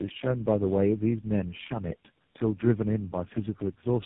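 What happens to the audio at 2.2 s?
At 2.2 s you're hearing tandem speech coding, which runs through the whole clip. The speech sounds like it went through several low-rate phone codecs in a row, each re-coding the last one's damage. That leaves it rough, warbly and muffled, with nothing above 3.8 kHz.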